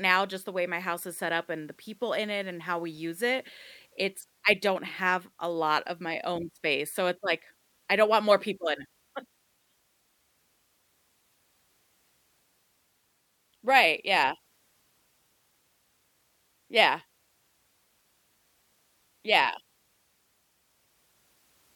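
No fault is audible anywhere in the speech.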